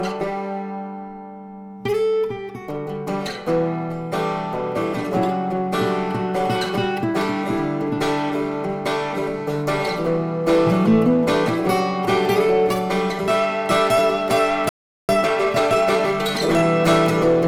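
At 14.69 s the audio drops out completely and stays silent for about 0.4 s, resuming at 15.09 s. This is a playback stall. The sound does not trail off but simply stops in mid-flow. The likely cause is the player's output buffer running dry, or its audio thread being blocked, so that nothing reached the output until data was available again.

From 15.09 s to 16.67 s the audio runs hurried, at roughly 1.25 times normal speed, while the pitch stays where it was. This is time-compressed catch-up. The player makes up the backlog from the stall by dropping short segments and cross-fading across the joins. The hurried stretch ends once the timing is back in step at 16.67 s.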